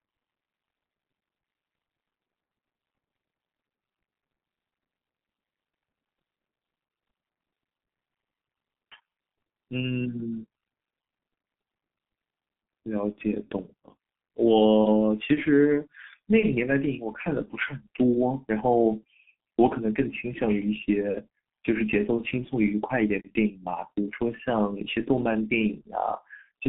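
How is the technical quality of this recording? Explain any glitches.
The technical quality is poor throughout, limited by heavy G.723.1 codec damage. From start to finish the speech is squeezed into a telephone band of roughly 150 Hz to 3.4 kHz, with nothing above 3.6 kHz. The coarse, slowly updated frame-by-frame voice model, consistent with about 6 kbit/s, leaves it muffled and hoarse with smeared consonants. A spectrogram shows a hard ceiling and blocky, blurred formants.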